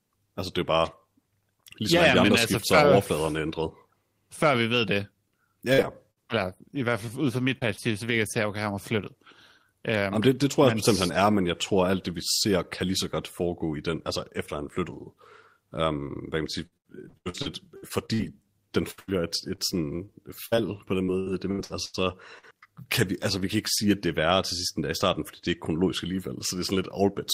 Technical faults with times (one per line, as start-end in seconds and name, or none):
5.73-5.80 burst of packet loss
5.82-5.85 short concealed packet loss
6.11-6.18 burst of packet loss
7.06-7.93 repeated packet loss (robotic sound)
16.66-18.24 repeated packet loss (robotic sound)
18.91-22.45 repeated packet loss (robotic sound)